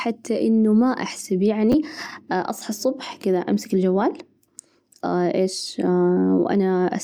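A 10 ms chunk of this speech clip was delivered one chunk late, so two chunks swap places between 1.72 and 1.74 s, causing chunks out of order. Three hard joins produce a brief jumbled flicker just before "أصحى الصبح كذا أمسك".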